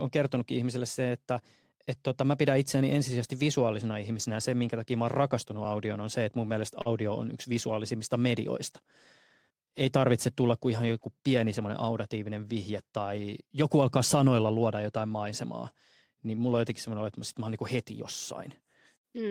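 At 6.81 s, about 40 ms of the speech stream failed to reach the decoder in time, and the receiver covered roughly 39 ms of that hole with short concealed packet loss. It extended the last stretch of sound, carrying its pitch forward or filling with shaped noise, then blended back into the real signal by 6.87 s. What comes through is a brief smear or wobble, and any short consonant in that window can go missing.

Overlapping the end of that gap, from 6.85 to 6.87 s, the final 20 ms was a lost packet rebuilt from error correction. The packet that followed carried a reduced-quality copy of the missing audio, and the decoder played that copy in place of the original, so no silence opens up. The 20 ms span fits a single packet. Those frames come out rougher and noisier than the audio on either side.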